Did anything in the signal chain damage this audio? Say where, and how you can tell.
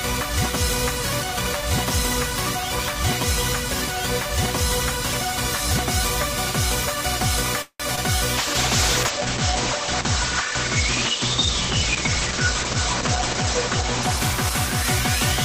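Yes, at the network stage. From 7.62 to 7.82 s the sound stops advancing and is replaced by a continuation of the last sound that fades, ending in about 50 ms of silence. It then resumes where it left off, roughly 178 ms late, with nothing missing. This is likely a call audio freeze from delayed packets draining the jitter buffer. On a spectrogram it appears as a smeared, decaying band, then a blank strip.

Also at the network stage, a short concealed packet loss occurs from 7.96 to 7.99 s. About 20 ms of real audio never reached the decoder, and the receiver bridged the hole with roughly 14 ms of extrapolated sound before blending back. It is audible as a brief smear or wobble. The waveform shows a short, too-regular stretch rather than a gap.

A call bitrate drop, involving the network estimate and the codec, runs from 8.38 to 15.41 s. The sound turns coarser and duller, and its lowest quality lasts about 5.2 s. 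This fits the encoder falling from about 32 to 9 kbps. The spectrogram's top edge drops from 20 kHz to 8 kHz, leaving empty space above it.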